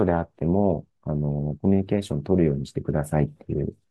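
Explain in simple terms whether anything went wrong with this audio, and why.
Nothing went wrong: the speech comes through steady and intact, with no dropouts, glitches or other technical faults audible anywhere in the recording.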